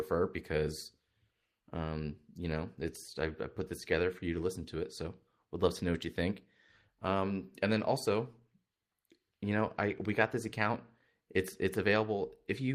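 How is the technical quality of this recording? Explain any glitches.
The technical quality of this recording is good, and there are no glitches to explain.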